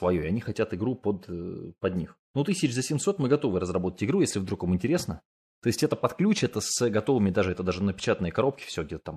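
No technical faults can be heard anywhere in the speech recording, with the signal staying steady and intact throughout.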